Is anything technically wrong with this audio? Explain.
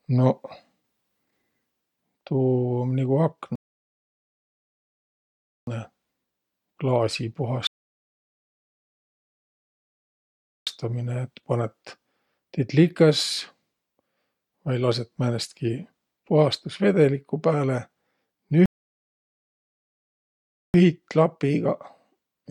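Yes. The speech drops into dead silence three times and picks up exactly where it left off: a rebuffering stall at 3.55–5.67 s after "um nigu", at 7.67–10.67 s before "et panõt tiit likõs", and at 18.66–20.74 s. The player exhausted its downloaded audio and waited for more, adding about 2.1 s, 3.0 s and 2.1 s of silence without losing any speech.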